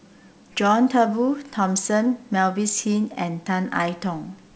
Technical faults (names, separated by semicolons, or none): none